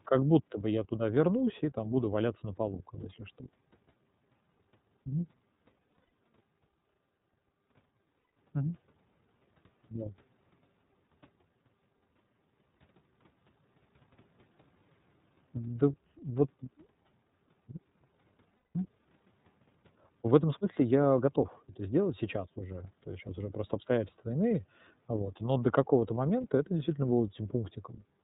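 Throughout the speech, the iLBC codec band-limits everything to below 4 kHz and leaves a plainly audible rough, slightly synthetic edge. The harshness fits the 13.33 kbps mode with 30 ms frames. Unlike a simple telephone low-pass filter, it adds coding grain on top of the dull top end.

Lost iLBC frames occur at 5.91 to 6.09 s, 8.22 to 8.26 s and 18.57 to 18.76 s. At each gap the decoder repeats the last pitch cycle, so the sound holds as a buzzy, breathy vowel instead of dropping to silence. The first gap has losses scattered over about 300 ms, with the longest run roughly 100 ms. The two later gaps fit about six lost 30 ms frames. Because each iLBC frame is decoded independently, the normal voice returns almost immediately after each gap, with no lingering smear.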